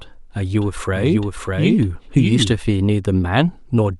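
From 0.6 s to 2.56 s the speech runs as a doubled audio track: a second, equally loud full-band copy trails by roughly 0.7 s, likely captured again through a slower path. Unlike an echo, it has no decay or room colour and cuts in and out abruptly.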